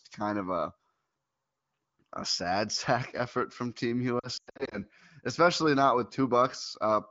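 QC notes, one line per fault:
4.19–4.78 s, lost AMR speech frames: scattered gaps totalling 260 ms, longest 100 ms, where the wideband decoder repeated then silenced corrupted frames, recovering before "especially not with".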